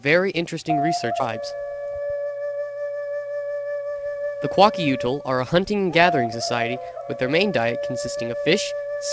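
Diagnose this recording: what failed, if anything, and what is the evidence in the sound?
Two things went wrong, both in the network and jitter buffer stage of the call path. The first is a skip ahead at about 1.2 s: the sound jumps forward with no gap and no fill, and something like three quarters of a second of audio is simply gone. That fits the buffer overflowing and dumping a chunk while newer audio was already queued, so playback stitches the two sides together directly. The delay drops by about the same amount.

Right after that, from 1.34 s to 2.31 s, there's a jitter buffer speed-up. The audio runs at about 106% speed with unchanged pitch, so it sounds a touch hurried. The buffer was still holding more than it wanted and trimmed itself by cutting out short pitch-period-sized slices over and over, about 70 ms in total. The G.722 codec at 64 kbps is working normally and stops at 8 kHz, as it should.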